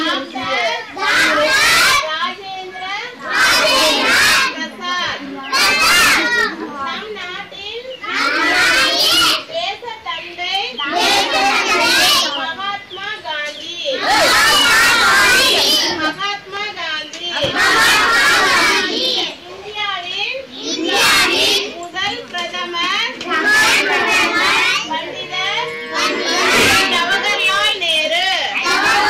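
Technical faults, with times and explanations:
Throughout, hard clipping: the audio is driven about 22 dB past what the signal chain can carry, so every peak that would exceed full scale is sliced off flat, and roughly a tenth of the samples sit pinned at the limit. Those squared-off tops generate a dense set of harmonics reaching well up the spectrum, which is why each loud moment turns into a harsh, buzzing fuzz rather than staying clean.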